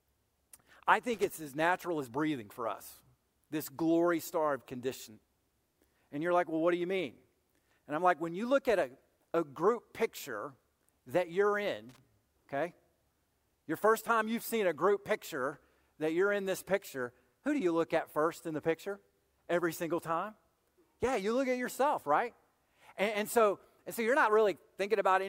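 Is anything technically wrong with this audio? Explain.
Yes. This speech clip has two bursts of loose connector crackle. The first runs from 1.14 to 1.30 s, just before "as natural as breathing". The second runs from 11.89 to 11.98 s, right after "group picture that you're". In each, a worn or dirty contact shifts and rapidly loses and regains connection, chopping the signal into an irregular scratchy crackle. Its uneven, clustered texture marks it apart from the single clean tick of a digital click.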